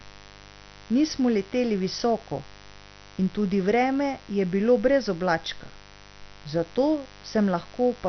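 A mains buzz runs through the whole speech clip. Sharp switching spikes at twice the 50 Hz mains rate leak in and add a dense ladder of harmonics. The result is a steady, raspy buzz, about 25 dB below the speech.

Also throughout, the speech is dull, with a gurgling, granular grit. Nothing survives above 6.1 kHz. The likely cause is heavy MP2 compression: starved of bits, the encoder switches off its upper sub-bands and coarsely quantises the rest. The damage fits a rate near 48 kbps.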